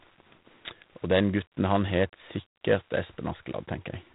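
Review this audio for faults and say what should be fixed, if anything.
The whole clip carries G.726 ADPCM damage, and it's plainly audible. The speech has a harsh, rasping hiss riding on it that rises and falls with the level, which fits G.726 running at 24 kbit/s. At that rate each sample gets only a few bits to describe its difference from the predicted value, so quantisation noise climbs. Nothing gets through above about 3.9 kHz either, giving that narrow telephone sound. To prevent it, record or transfer over a wideband path, or at least run G.726 at 32 kbit/s.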